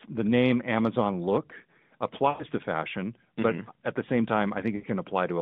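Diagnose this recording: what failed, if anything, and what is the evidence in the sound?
Twice the speech smears into a held tone that fades toward silence and then returns weak or rough: from 2.30 to 2.44 s (100 ms) and from 4.76 to 4.86 s (80 ms). These are lost AMR speech frames on the network radio link. Corrupted frames failed their checks, so the AMR narrowband decoder, band-limited to roughly 150 Hz to 3.7 kHz here, replayed the last good pitch and vocal-tract settings at decaying gain. The gap lengths fit runs of five and four 20 ms frames.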